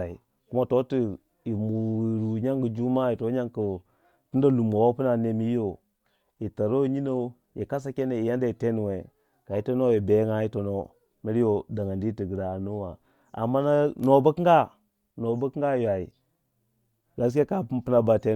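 Speech recording, no technical faults heard anywhere in the clip.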